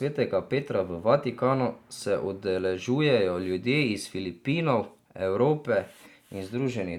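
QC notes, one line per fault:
No faults found in the speech. Nothing in the audio calls for a QC note.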